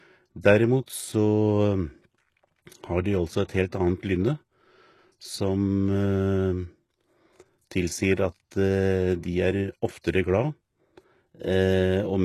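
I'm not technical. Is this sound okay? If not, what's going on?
No. The speech has plainly audible compression damage throughout, most likely from HE-AAC compression. This method keeps the lower sounds and fakes the highest ones by copying lower parts upward. Nothing real remains above about 12 kHz, so s sounds come out gritty, metallic or lispy.

There are also two brief moments of pre-echo, at 0.86 s and from 10.01 to 10.04 s. The compression smears its noise backward in time, so a short hiss arrives just before a sharp sound. That sound's start is softened and blurred.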